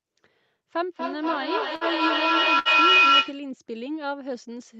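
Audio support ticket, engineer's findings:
Feedback echo between two devices, 0.77 to 3.49 s: speech returns about every fifth of a second, thinner and ringier each pass, building to about 11 dB above the speech. Another device's loudspeaker feeds this microphone. Regular repeats, unlike reverb.

Burst of packet loss, 1.75 to 1.84 s and 2.59 to 2.68 s: concealment holds and fades the last sound for about 56 and 62 ms, then about 60 ms of speech is skipped. Jitter buffer or network, not a clean dropout.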